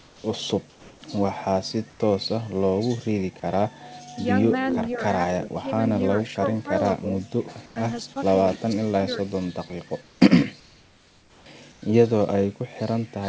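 From 0.00 to 0.24 s, 0.70 to 1.02 s and 1.90 to 2.00 s, the pauses carry comfort noise in place of the background: a steady, featureless hiss about 4 to 6 dB quieter than the real background. This is likely from discontinuous transmission. On a spectrogram these gaps show as flat, uniform smears.

From 4.72 to 4.95 s an echo leak is audible: a faint copy of the voice, about 15 dB down, arriving 231 ms late. It is likely residual loudspeaker echo, and it shows as a weak repeat of the preceding waveform shape.

Speech is suppressed in double talk at 5.40 to 5.67 s, 6.36 to 6.69 s, 7.01 to 7.07 s, 8.11 to 8.15 s and 8.61 to 9.27 s. The voice briefly dips, by roughly 5 dB at first and as much as 20 dB in the last stretch. This is likely from the echo canceller ducking both sides, and it shows as notches in the waveform envelope.

Comfort noise returns at 7.66 to 7.76 s, 10.02 to 10.20 s, 10.60 to 11.46 s and 11.72 to 11.82 s, again about 3 to 4 dB below the background, as smooth bands under the 8 kHz ceiling of the G.722 call path.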